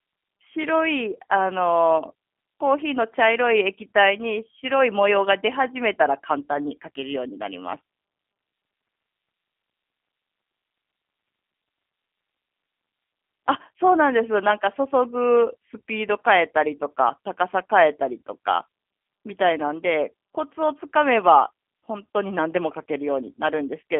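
G.729 codec damage runs through the whole speech clip. Each 10 ms frame is rebuilt from a vocal tract filter, a pitch predictor and a few pulses at 8 kbit/s, leaving a rough, synthetic edge. The band sits at roughly 250 Hz to 3.4 kHz, with nothing above 3.5 kHz.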